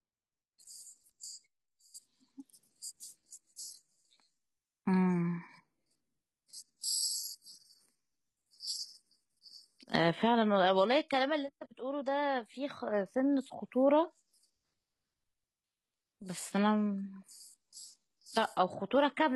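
At 3.23 s the speech suddenly drops in quality and stays that way to the end. That's an adaptive stream dropping to a lower bitrate after the connection slowed. Codec artefacts rise, which fits a switch from full AAC down to roughly 20 kbit/s HE-AAC, with no gap at the change.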